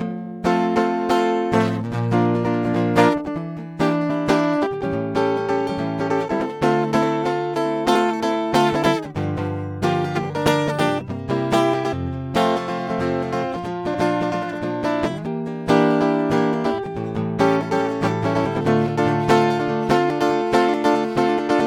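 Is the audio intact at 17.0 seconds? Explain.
Yes, the music at 17.0 seconds plays through intact, with no fault at that moment.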